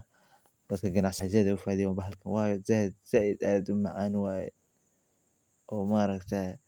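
In this speech recording, a skip ahead occurs between 1.19 and 1.34 s: with later audio already queued, a stretch of roughly 400 ms was discarded, either in transit or by an overflowing jitter buffer. Playback lurches forward with no gap, joining the two sides almost directly and leaving a chunk of speech simply absent. Shortly after, from 1.78 to 2.16 s, a jitter buffer speed-up follows: holding more audio than its target, the receiver trimmed short pitch-period pieces repeatedly, about 70 ms in total. That stretch runs at 114% speed with unchanged pitch, so the speech sounds briefly hurried.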